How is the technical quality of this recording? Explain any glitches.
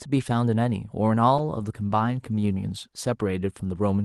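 The recording has one clear glitch, a call bitrate drop starting at 1.39 s and lasting to the end of the clip.

Before the drop, the call path sounds like Opus with a bandwidth of about 12 kHz. From 1.39 s the encoder is given far fewer bits, and the speech turns rough, watery and duller. That fits a fall from around 64 kbps to about 16 kbps, held at its lowest for 1.6 s. On a spectrogram, the energy above the new, lower ceiling disappears. Coarse, smeared blocks replace fine harmonic detail. The waveform envelope changes little.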